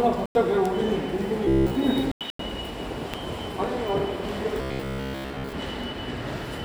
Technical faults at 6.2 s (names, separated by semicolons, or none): none